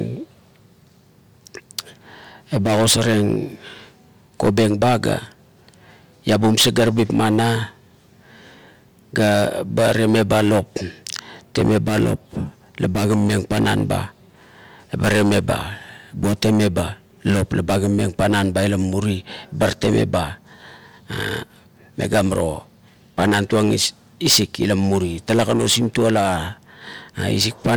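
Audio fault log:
No faults found in this speech clip.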